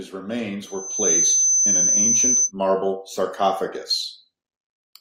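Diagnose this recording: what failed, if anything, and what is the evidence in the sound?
Loudspeaker feedback squeal, in the analogue mic-to-speaker loop. From 0.64 s a 6.1 kHz tone swells over about half a second to sit roughly 10 dB above the speech, then stops at 2.52 s. The mic was hearing its own speaker, and loop gain passed one there.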